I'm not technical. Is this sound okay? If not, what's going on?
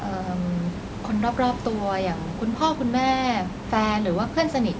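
Yes, this one's fine: nothing has gone wrong with the sound, and the room background and the slightly trimmed lowest bass from the call's microphone processing are just normal parts of the recording.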